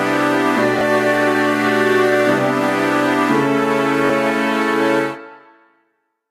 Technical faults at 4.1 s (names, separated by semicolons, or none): repeated buffer